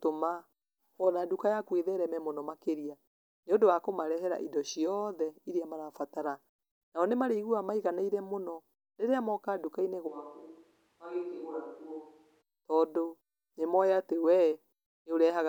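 From 10.09 to 12.40 s, likely a switch to a distant microphone: speech turns roomy and about 10 dB quieter; the waveform shrinks, the spectrogram thins in bass and gains noise.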